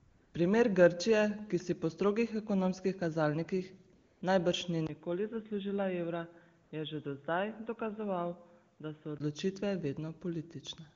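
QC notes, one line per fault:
0.00–0.33, 3.95–4.21, 6.63–6.71 and 8.77–8.79: AMR comfort noise. Four short gaps where the phone decided nobody was talking and stopped sending speech frames, so the far end patched in synthetic hiss built from a rough level-and-spectrum sketch. The second one sits right after "po strogih ekonomskih kazalnikih" and before "najbrž ni". In each spot the real room tone gets swapped for a smooth, steady wash that snaps in and out. The gaps run from 20 ms up to about a third of a second.
4.87–9.20: input switched to a poorer device. Just after "najbrž ni" there's a 20 ms dropout, and then the sound goes dull and boxy, with nothing above 3.8 kHz. It's also about 5 dB quieter and carries a new noise floor roughly 35 dB down. At 9.20 it opens back up. That pattern likely means the system hopped to another mic or a headset call profile for those four-odd seconds. The AMR-WB stream itself, at 23.85 kbit/s, adds little or no damage of its own, so the narrow band is coming from the input, not the codec.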